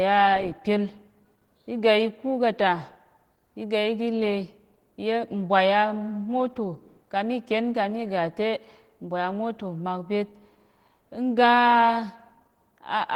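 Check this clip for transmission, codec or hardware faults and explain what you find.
One codec fault runs the full length of this speech: Opus voice compression.

Throughout, the speech sounds hoarse and faintly robotic. The damage is plainly audible. It fits hybrid Opus near 16 kbps, with linear-prediction coding below 8 kHz, a coarser transform layer above, and 20 ms frames. A spectrogram shows smeared harmonics, with content reaching about 20.1 kHz.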